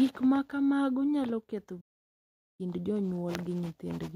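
A playback stall runs from 1.80 s to 2.61 s, just after "ma kamago nyalo ketho". The speech cuts off in mid-flow and the output falls silent for about 0.78 s before the sound resumes. The likely cause is the player running short of buffered data, or its playback thread being blocked, so nothing reached the output until it recovered and carried on.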